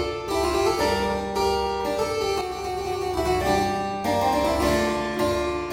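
From 2.41 to 3.17 s the level falls abruptly by about 6 dB and then snaps back, which points to one channel dropping out. The likely cause is one stereo channel going missing before a mono sum, so material common to both sides halves while anything only on the lost side vanishes. Unlike a full dropout, the sound never goes silent.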